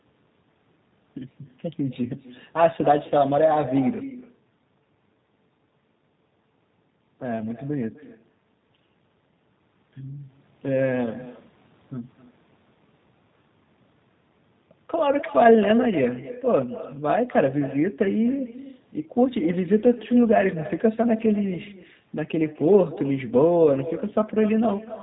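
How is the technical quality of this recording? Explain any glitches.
The speech has two faults that run from start to finish.

Echo with no canceller is present throughout. The far end plays the call on a loudspeaker, and its microphone sends it straight back. Nothing removes it. Every phrase returns roughly a third of a second later, about 15 dB quieter and thin.

G.729 codec damage is plainly audible throughout. The codec rebuilds speech from a vocal tract model, a pitch predictor and a few pulses per frame, which fits an 8 kbit/s G.729 stream. Nothing above 4 kHz survives. The speech sounds rough and slightly synthetic.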